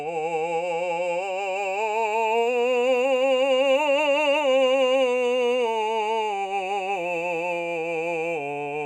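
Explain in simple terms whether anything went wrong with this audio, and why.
Nothing went wrong here; the music runs along without any dropouts, glitches or other trouble you'd notice by ear.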